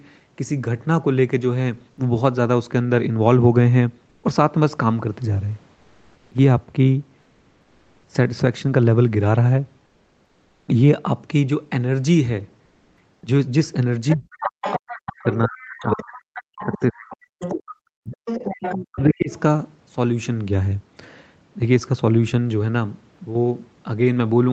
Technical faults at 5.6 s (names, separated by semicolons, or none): none